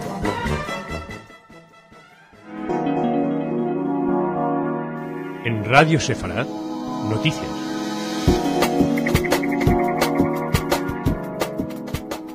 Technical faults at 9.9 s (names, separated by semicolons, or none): none